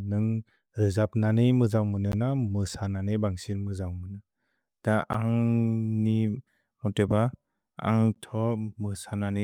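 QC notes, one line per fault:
Throughout: sample clock jitter. The converter clock wanders by something like a microsecond, so samples land slightly off time. The error tracks waveform slope, giving a faint hiss and roughness roughly 50 dB below the speech, strongest on loud, bright sounds and absent in pauses.
2.12 s, 5.13 s, 8.15 s: gap between chunks. Right after "ननेइ मुजन्ग् मुन" and twice more, a hole of about 13 ms cuts the speech. The spacing matches 3.0 s chunks being joined with silence at each boundary. No material is lost, but flow is interrupted.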